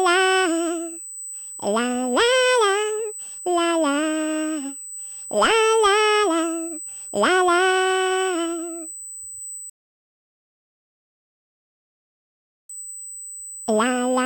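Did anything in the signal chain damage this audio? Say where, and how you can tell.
Yes, two things. First, a USB whine runs the whole length: a steady fixed-pitch tone at 8 kHz, sitting about 15 dB under the programme. That's the analogue side picking up the bus's 125-microsecond microframe rhythm through power or ground, so it's a wiring or grounding issue around the interface, not anything digital in the audio path itself. Check the cable, the hub and the supply.

Second, there's a rebuffering stall at playback. At 9.70 s the audio drops to silence and picks up again at 12.70 s exactly where it left off, so nothing's missing, just 3 seconds of dead air added. That's the player running dry on downloaded data and waiting for more to arrive, so it's a delivery problem rather than damage to the recording.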